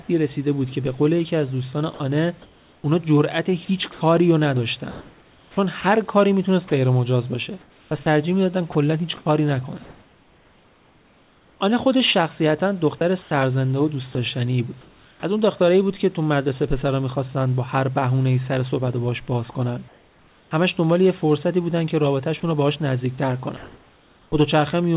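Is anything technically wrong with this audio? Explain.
Yes. The speech is repeatedly interrupted by voice-detector gating, with synthetic noise standing in for what was cut. The sound is narrowband, with nothing above 4 kHz, which fits a G.711 call path. The room noise sits about 34 dB below the speech.

Sound chopped by the voice detector occurs from 1.94 to 5.84 s, 7.61 to 11.6 s and 12.98 to 15.23 s. Within these stretches the sender's detector most likely kept toggling transmission on and off, treating softer parts of the speech as background. The receiver filled the gaps with generated noise, about 1.3 s, 2.2 s and 0.57 s of it respectively. The result is choppy speech. Unlike a single dropout, the switching recurs more than once across each stretch.

Sound dropped by the voice detector occurs at 19.52 to 19.55 s and 22.40 to 22.43 s. In each case the detector likely judged a quiet bit of speech as background and briefly stopped sending. 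About 20 ms of real sound is lost, and 30 ms of steady noise takes its place before transmission resumes. Each one is a single short gap, not the repeated on-off flutter of the chopped stretches.

Comfort noise in place of the background runs from 19.52 to 20.51 s. During this pause, transmission likely halted because no speech was detected. The receiver played generated noise roughly matched to the room for about 0.66 s. The real background, with its small variations, turns into a flat, uniform hiss until the speech returns. What gives it away is the change in background texture.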